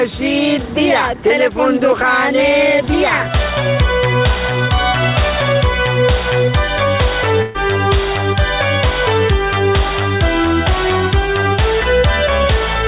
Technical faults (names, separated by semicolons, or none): burst of packet loss